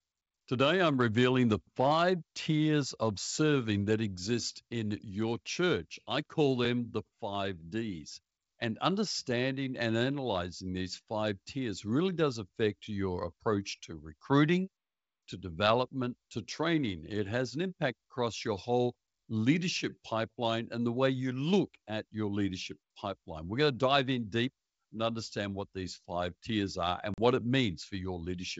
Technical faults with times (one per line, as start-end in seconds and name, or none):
27.14-27.19 packet loss on an ADPCM call